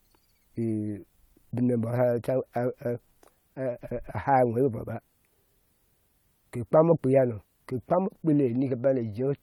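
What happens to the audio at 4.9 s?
At 4.9 s the speech continues cleanly, with no audible fault at that moment.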